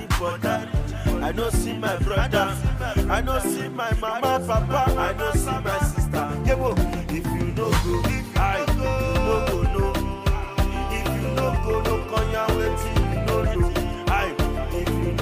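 No faults detected anywhere in the clip.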